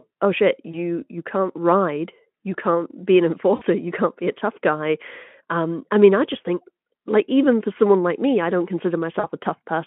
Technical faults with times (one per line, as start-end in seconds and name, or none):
0.71-0.78 VoIP packet loss concealed by the speech codec
3.55-3.63 VoIP packet loss concealed by the speech codec
9.19-9.28 VoIP packet loss concealed by the speech codec